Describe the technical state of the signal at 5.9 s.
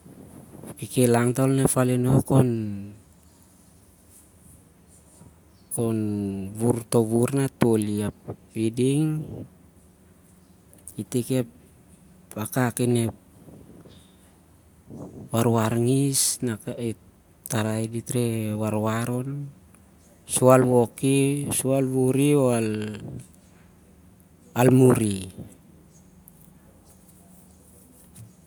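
At 5.9 s the speech comes through intact, with no audible dropout, distortion, clipping or other technical fault at that point.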